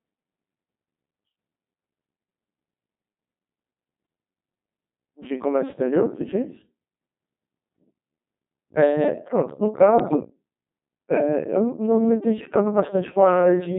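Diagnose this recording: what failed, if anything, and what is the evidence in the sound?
The codec stage failed: the speech passed through a Codec 2 vocoder at 2.4 kbit/s, which sends only pitch, voicing, energy and spectral envelope and rebuilds the voice from sine waves. Throughout, the result sounds heavily robotic and buzzy, with the natural waveform gone.

Bit errors on the digital voice radio link corrupted the vocoder parameters from 10.0 to 10.3 s, at a rate of a few percent. Each flipped bit disturbs a whole frame, so for that 0.3 s the synthetic voice jumps in pitch and level and breaks into warbling, bleepy gibberish.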